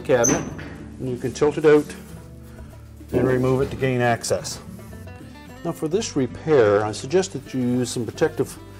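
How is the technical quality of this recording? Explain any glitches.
The recording has two brief stretches of degraded quality. From 0.65 to 1.95 s and again from 6.03 to 7.38 s, the treble dulls and a gritty noise creeps in, then clears. This is a Bluetooth SBC bit pool drop: the link starved, the encoder cut its bit allocation, which points to a fall from bit pool 31 to about 13, near 94 kbps, leaving the top sub-bands with few or no bits and the remaining bands coarsely quantised.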